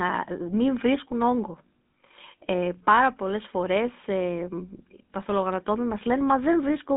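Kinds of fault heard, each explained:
GSM full-rate codec: the old phone codec rebuilds the sound from sparse pulses, so it's plainly buzzy and gravelly, with nothing above about 3.8 kHz.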